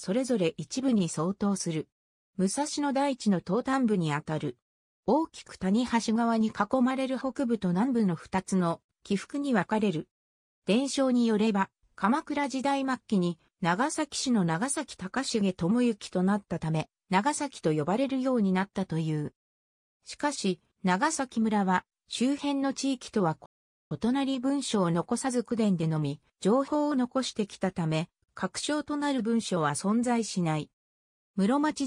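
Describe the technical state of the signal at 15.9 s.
At 15.9 s the signal is intact, with no audible fault at that moment.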